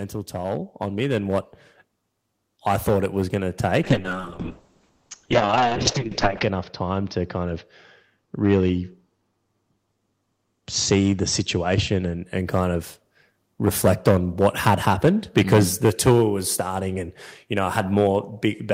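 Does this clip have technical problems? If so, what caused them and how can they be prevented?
Yes. Hard clipping runs through the whole speech clip: the input is overdriven by about 10 dB, so a small fraction of peaks get flattened into crackly harmonics. Set the input level lower so the loudest peaks stay below full scale.

Automatic gain rising shows up from 0.3 to 1.55 s, where the AGC judged the start too quiet and brought the level up about 6 dB, lifting the voice and background together. Start talking at a steady level, or give the AGC a moment to settle before speaking.

The call bitrate drop runs from 3.84 to 12.31 s. The encoder fell from 32 to 6 kbps and sat at its lowest for about 2.6 s, while bandwidth narrowed from 20 kHz to 8 kHz, so the speech turns rough and muffled. A steadier, less congested connection would keep the bandwidth estimate from collapsing.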